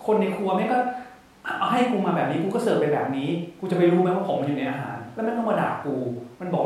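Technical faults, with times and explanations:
No technical fault can be heard anywhere in this speech recording, and the signal holds steady from its opening to its close.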